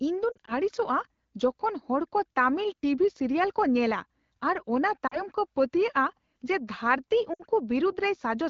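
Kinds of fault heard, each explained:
Lost AMR speech frames: around 0.32 to 0.52 s, 5.07 to 5.18 s and 7.33 to 7.41 s, radio errors corrupted short stretches of the coded speech, and the AMR wideband decoder patched each gap by repeating its last good pitch and vocal tract settings at dropping gain. The sound briefly warbles or smears, most in the first stretch where about 80 ms went missing in bursts of up to 40 ms, then recovers slightly rough.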